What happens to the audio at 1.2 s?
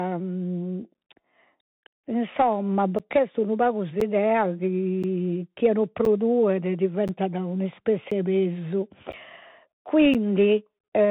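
At 1.2 s the speech sounds muffled and narrow, with scratchy s sounds and a grainy hiss beneath it. This is the Bluetooth CVSD headset codec, present throughout: a one-bit-per-sample 64 kbps coder whose adapting step lags fast, loud high content, passing nothing above 3.8 kHz.

The moment also falls inside a run of regular ticks, each a brief gap of silence of about 10 ms, repeating every 1.02 s from 0.94 s to 10.15 s, roughly ten in all. These are periodic USB or driver dropouts, where a blocked bus or driver periodically drops a slice of audio.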